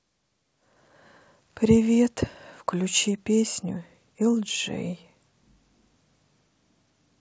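No technical fault can be heard in this speech clip, which has come through G.722 wideband telephone coding at 64 kbit/s and shows at most a faint trace of that codec.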